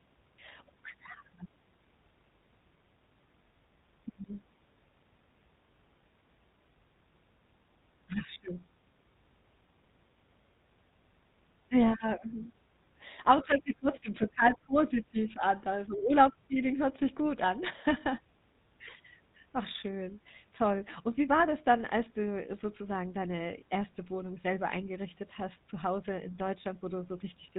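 GSM full-rate codec coding runs throughout this speech clip, giving it a plainly audible buzzy, gravelly roughness and a band limit at 4 kHz, which fits the 13 kbps full-rate coder. The codec replaces the speech with a vocal-tract filter excited by a sparse, regularly spaced pulse train built from only every third excitation sample. That coarse excitation produces the grainy buzz, and nothing above 4 kHz survives.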